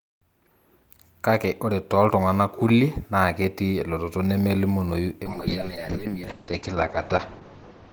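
At 5.28 s a call bitrate drop sets in and lasts to the end of the clip. The call's bandwidth estimate collapses, and the encoder is pushed from a rate that fits about 32 kbps down to one consistent with about 7 kbps. Forced to spend far fewer bits, it quantises the speech coarsely and narrows the coded band from 20 kHz to 6 kHz. The speech turns muffled and rough and watery, and it never recovers.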